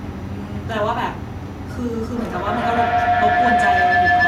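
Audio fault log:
2.16 to 4.27 s, feedback howl: a second device in the room closes the mic-to-speaker loop, so each pass comes back louder and narrower until it settles into a tone around 700 Hz, with the loop repeating roughly every 150 ms and peaking about 7 dB over the speech, right to the end.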